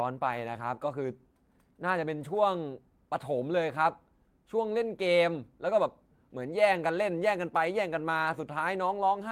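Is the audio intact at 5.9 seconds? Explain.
Yes, the audio is intact at 5.9 seconds, with no fault at that moment.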